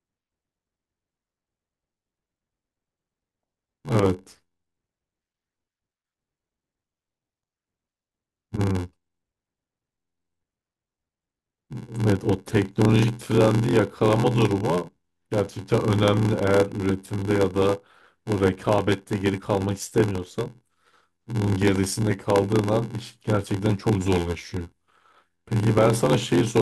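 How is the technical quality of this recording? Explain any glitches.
The speech is marred by one fault. A block size mismatch (padded) runs throughout the clip. Each block written is shorter than the block read, which fits a 512-sample read, so zeros fill every block. The result is an 86.1 Hz buzz and speech slowed to 0.861 of normal speed at roughly normal pitch.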